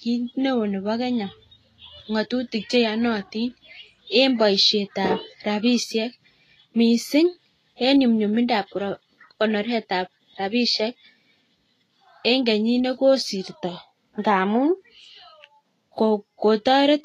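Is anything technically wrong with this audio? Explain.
Yes. Throughout the clip the speech sounds hissy and grainy, with roughened tones and softened consonant attacks, and nothing reaches above about 14.2 kHz. This is likely Vorbis compression at a low setting, consistent with a bitrate near 30 kbps. At that rate the encoder drops everything above its cut-off and quantises the upper bands so coarsely that fine detail is replaced by noise of similar energy, which produces the granular hiss.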